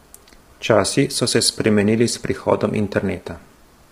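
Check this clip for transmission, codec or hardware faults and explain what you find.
One fault runs through the whole clip: low-delay AAC compression. The speech was likely coded with AAC-ELD at a heavily squeezed rate, around 24 kbps. Its short frames resolve pitch harmonics poorly, leaving the voice rough and grainy, with noise filling the gaps between harmonics and a dulled, synthetic-sounding top band.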